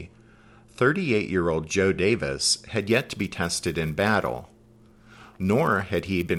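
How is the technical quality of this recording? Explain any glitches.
The recording has one clear fault. From 2.79 s to the end, a resampler restarted on every block adds a buzz. Each 10 ms block was converted from 24 kHz to 48 kHz on its own. So its edges lacked true neighbouring samples. These edge errors repeat at 100 Hz. They form a buzz that follows the speech.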